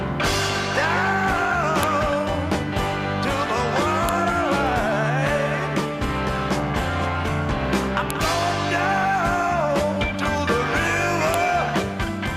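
Sharp, loud clicks land at 1.83, 4.09, 8.10 and 11.34 seconds. These are a file header played as audio: separate WAV pieces were joined without stripping their headers, so a few dozen bytes of file metadata were decoded as samples at each seam. What separates these snaps from ordinary splice clicks or clipping is that they are brief, abrupt bursts of arbitrary values arriving at each piece boundary regardless of the surrounding sound's level.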